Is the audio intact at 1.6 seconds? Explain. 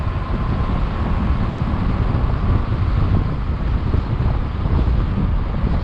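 No. A short stall from a late packet runs from 1.49 to 1.60 seconds. A packet arrived late and the jitter buffer ran dry. The last sound was held for about 90 ms, then playback resumed. Nothing is lost, but that sound drags with a faint buzz or dip.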